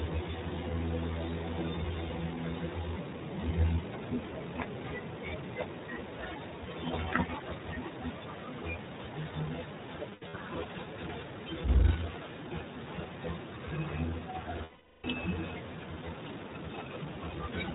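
From the start the speech runs through the iLBC codec, nothing above 4 kHz, with plainly audible roughness and a slightly synthetic edge. The 20 ms frames and the level of damage fit a rate of about 15 kbps, each frame coded independently of the last.

At 10.10 to 10.35 s there are lost iLBC frames, about 160 ms missing across a 240 ms stretch, the longest gap roughly 70 ms. The decoder repeats the last pitch cycle with noise, giving short buzzy held-vowel patches. At 14.64 to 15.06 s a solid 400 ms loss produces a longer held, breathy tone that fades, and the speech snaps back clean almost at once.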